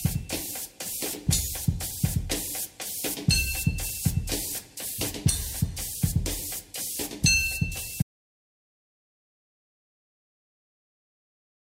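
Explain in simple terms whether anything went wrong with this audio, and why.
Something went wrong at 8.02 s: most likely the input was cut off, through a lost connection or an accidental mute, while recording carried on. This audio dropout to silence leaves dead, empty quiet from there to the end, with even the background gone.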